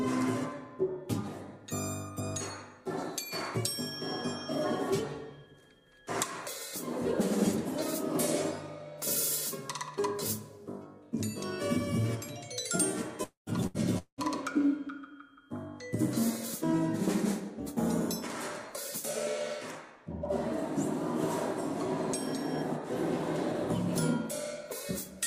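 At 13.23 s the sound breaks off. The last moment is stretched into a fill of about 230 ms that fades into 140 ms of silence, and 240 ms of audio never returns. This is likely a long network dropout. On a spectrogram the final frame smears into flat horizontal bands that dim to an empty strip, and the waveform collapses to a flat line.

At 13.67 s comes a burst of packet loss. About 80 ms goes missing and is bridged by a 77 ms held continuation that turns quieter as it goes. It shows as a short smeared, fading patch before normal detail resumes at 13.77 s.

At 13.98 s the sound cuts out again, likely another long network dropout. A decaying fill of about 190 ms, the last 100 ms of it silent, covers 200 ms of lost audio. It appears as a flat blur tapering into a blank gap in the waveform until the sound resumes at 14.21 s.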